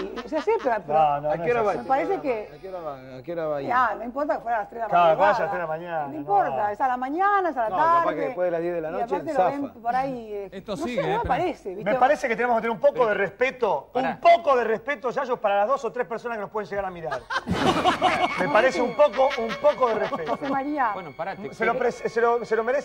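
No technical faults can be heard anywhere in the audio.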